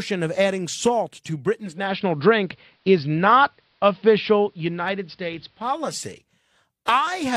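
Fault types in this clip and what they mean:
Digital radio blending to analogue: after "of adding salt to" at 1.48 s the receiver lost its digital stream and cross-faded over 442 ms to the AM broadcast, returning at 5.99 s. Meanwhile the speech shifts about 4 dB in level and gains faint hiss.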